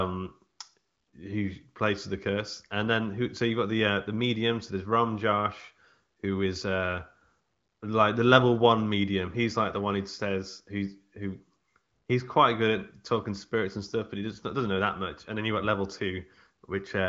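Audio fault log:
Nothing stood out on listening to this speech, which comes through the HD Voice path at a rate that fits 23.05 kbit/s with nothing heard above about 7.6 kHz.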